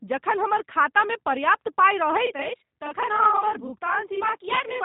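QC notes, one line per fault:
throughout, G.729 codec: the speech sounds plainly rough and a bit synthetic, with nothing above 3.8 kHz. It's rebuilt from a vocal tract model, pitch prediction and a handful of pulses per short frame, which fits an 8 kbit/s stream.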